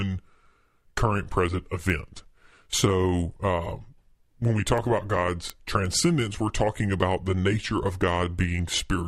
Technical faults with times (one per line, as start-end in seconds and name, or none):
0.46-8.74 word clock ticks